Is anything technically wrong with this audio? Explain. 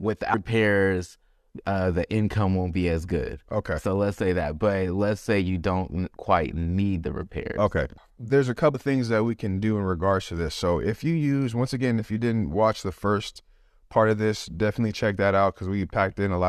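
Yes. Two brief glitches break up the speech, at 0.33 s and again at 8.73 s. Each is a short chirp, squawk, click or brief hole in the sound. This is damaged data in a compressed stream: at those points the encoded bytes were corrupted, so the decoder misread the affected frames, lost its place in the stream and had to resynchronise on the next valid frame header.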